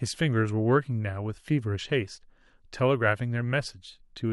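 No technical faults occur at any point in the recording.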